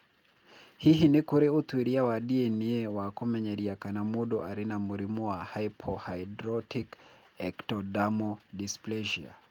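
No technical faults can be heard anywhere in the speech, and the signal stays steady and intact throughout.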